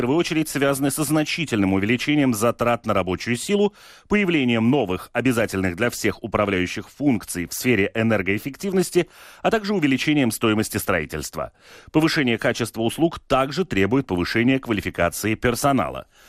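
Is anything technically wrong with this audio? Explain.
Yes, two things. Throughout, the speech sounds dull, with a gurgling, granular edge. That's likely MP2 compression at a low rate, maybe around 80 kbps. Layer II starves its 32 sub-bands of bits, so upper bands drop out and the remaining ones get coarsely quantised.

There's also DAB burbling: a brief burble at 8.21 s and a longer one from 14.43 to 14.52 s. It sounds like a few frames' worth of bit errors, well under a percent, slipping past error correction and putting short blips of noise into individual sub-bands.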